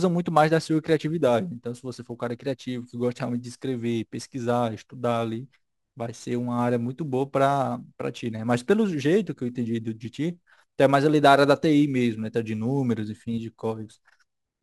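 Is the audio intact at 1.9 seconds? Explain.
No. At 1.9 seconds the speech carries sample clock jitter, present through the whole clip. The converter clock wanders by around 10 microseconds, so each sample lands slightly off time, and the error grows wherever the waveform changes quickly. It is heard as a fine hiss riding on the louder, brighter parts of the speech, roughly 25 dB below it. On a spectrogram, a faint broadband haze follows the energy of each syllable and clears in pauses; the waveform looks unchanged.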